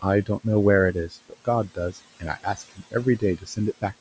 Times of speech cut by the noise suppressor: 0.93-3.58

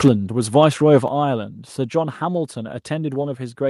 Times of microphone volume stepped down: 0.08, 1.08

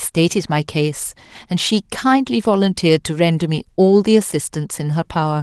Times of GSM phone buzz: none

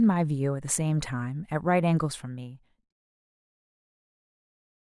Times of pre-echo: none

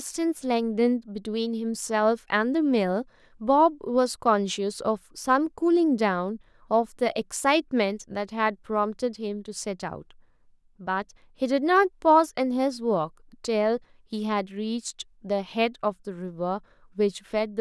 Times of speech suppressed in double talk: none

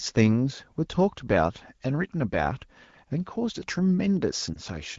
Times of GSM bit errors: none

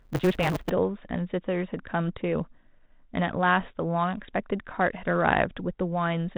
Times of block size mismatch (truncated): 0.00-0.70

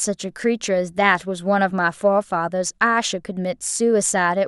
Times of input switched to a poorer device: none

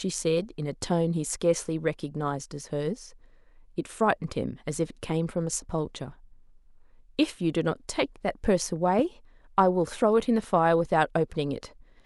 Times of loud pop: 8.99-9.02

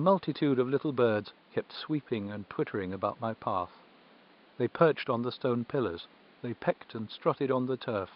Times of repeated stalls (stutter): none

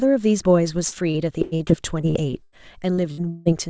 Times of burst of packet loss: 3.12-3.19

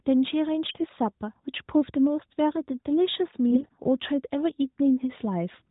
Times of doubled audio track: none

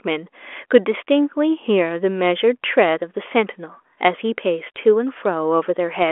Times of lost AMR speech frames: none

